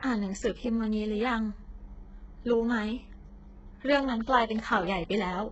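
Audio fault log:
Throughout: likely HE-AAC compression, fitting about 8 kbps; nothing above 8 kHz, and the copied-up treble leaves the speech's s sounds heavily gritty and lispy.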